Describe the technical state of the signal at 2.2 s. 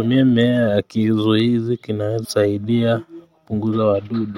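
Damaged data in a compressed stream, from 2.23 to 2.26 s: corrupted frames make the decoder lose sync and hunt for the next header, leaving a brief blip.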